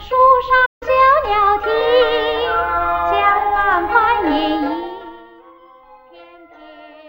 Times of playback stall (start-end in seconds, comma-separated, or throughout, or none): 0.65-0.83